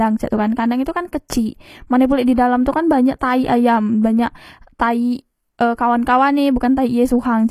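Throughout, likely HE-AAC compression at a rate fitting 24 kbps rebuilds the treble from copied lower bands, leaving plainly audible coding damage and nothing above 14.9 kHz.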